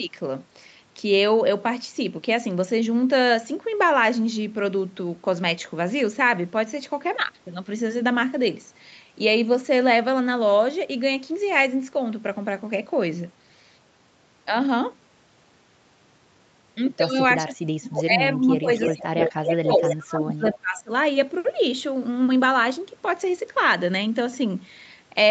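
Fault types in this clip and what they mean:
Speech suppressed in double talk: Between 17.36 and 20.9 s the speech level drops sharply in pieces, by up to about 30 dB, likely an echo canceller turning the talker down while both sides spoke. The waveform shows a chopped, hollowed envelope, and the spectrogram thins into gaps.
Echo leak: Short scraps of a delayed copy of the speech, 312 ms late, come through between 18.77 and 20.57 s at about 5 dB below the speech, one near 20.5 s about 15 dB down. This is likely loudspeaker echo the canceller missed. The spectrogram repeats the speech's patterns, shifted later.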